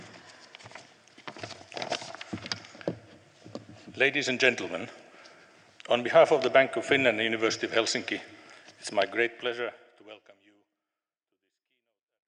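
No technical faults can be heard anywhere in the audio. Near the end, from around 9 s, the level eases down in a smooth, editor-style fade that reaches silence at 12.3 s.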